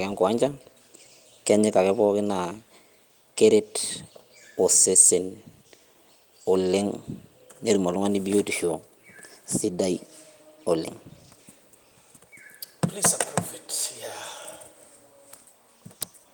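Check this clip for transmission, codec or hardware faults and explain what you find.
Nothing in the speech points to a transmission, codec or hardware fault: the Opus voice path runs in hybrid mode with full bandwidth reaching about 20 kHz, its light coding texture fits a setting around 24 kbps, and there are no dropouts, glitches or distortion events to report.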